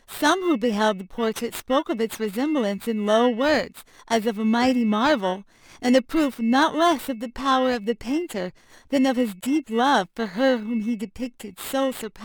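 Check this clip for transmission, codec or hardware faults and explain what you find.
The clip has one hardware fault: periodic clock jitter, present from start to finish. Interference is modulating the converter's sampling clock at a fixed rate of around 2 kHz, so every frequency component of the speech gains sidebands spaced about 2 kHz above and below it. The effect grows with frequency, so sibilants and upper harmonics carry the strongest spurious content. It sounds like a rough, metallic edge riding on the voice, disappearing in the pauses between phrases.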